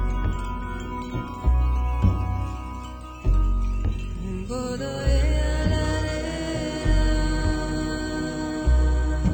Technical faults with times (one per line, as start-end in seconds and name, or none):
1.28-3.52 sample clock jitter